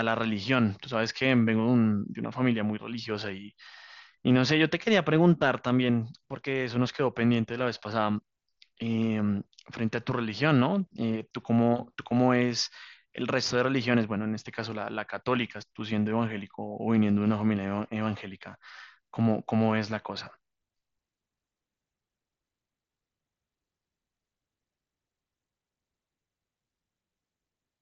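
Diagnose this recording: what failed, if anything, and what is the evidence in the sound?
Nothing failed anywhere along this speech recording's path.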